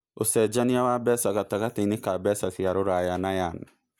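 No technical faults can be heard anywhere in this speech recording. There is nothing in it that needs to be marked at any point in time.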